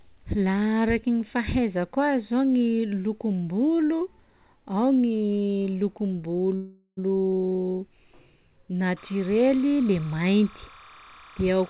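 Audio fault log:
6.56–6.99 s, call audio freeze: the last sound drags on as a fading buzz, falls briefly silent, then resumes intact; likely packets stalled and the jitter buffer ran dry.
8.97–11.69 s, timecode bleed: a steady chirping warble near 1 and 2 kHz, about 25 dB under the speech, from 30 frame/s linear timecode leaking in.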